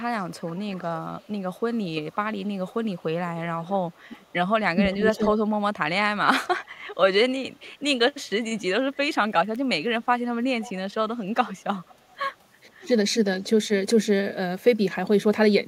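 A speech recording in which a faint copy of the talker trails 493 to 504 ms behind, about 25 to 30 dB down, from 0.2 to 5.33 s, 7.7 to 8.63 s and 10.02 to 12.44 s. This is echo leak, likely from a loudspeaker-side echo canceller passing back part of what its microphone caught. The voice also briefly dips, by roughly 10 dB between 4.09 and 5.2 s and by roughly 25 dB between 12.79 and 13.69 s. This is speech suppressed in double talk, likely the canceller turning the talker down along with the echo while both sides spoke.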